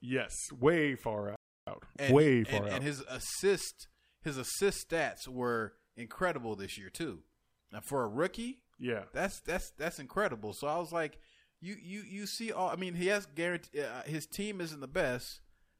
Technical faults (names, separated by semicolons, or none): playback stall; time-compressed catch-up